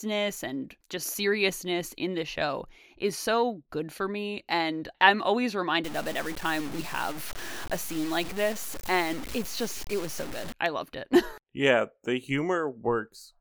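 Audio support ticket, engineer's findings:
Grainy, signal-following distortion on speech from 5.84 to 10.54 s, after "I'm always", clearing before "I loved it". Likely low bit depth without dither: about 6-bit truncation, error roughly 15 dB below signal. Grit tracks level, quiet tails sputter or drop out. Steady hiss from noise or dither would stay constant under pauses.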